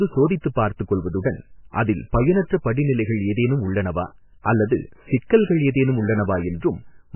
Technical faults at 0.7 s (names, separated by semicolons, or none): MP3 compression